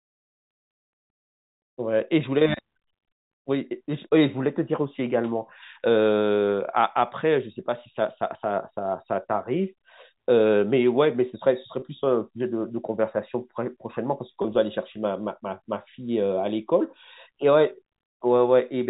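At 11.80 to 11.82 s and again at 14.42 to 14.44 s, packet loss with pitch repetition: each gap, consistent with one lost 20 ms packet, is bridged by repeating the last pitch period, heard as a brief held, buzzy note over the band-limited G.711 telephone sound.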